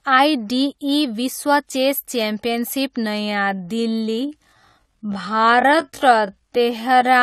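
At 3.01 s the speech abruptly slows and stays slowed through to the end, running at about 0.59 times its earlier pace while its pitch stays where it was. This is a time-stretched section, most likely produced by software stretching the audio to fill a set length and holding pitch by repeating short pieces of the signal. To the ear, the delivery suddenly drags from that point onward.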